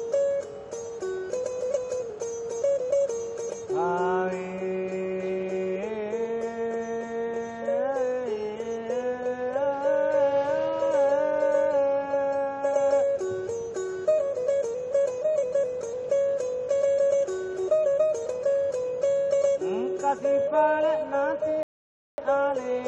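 Right near the end, from 21.63 to 22.18 s, there's a rebuffering stall: the player ran dry of downloaded audio and just waited for more. You get about 550 ms of dead silence, then the sound picks up exactly where it stopped, nothing skipped, just time added.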